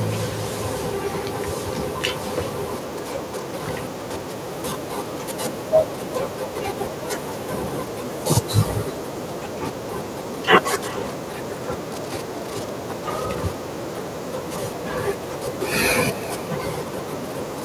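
Throughout, each phrase returns as a thin copy roughly 0.4 s later, about 22 dB down. This is echo with no canceller: the far loudspeaker leaks into its microphone.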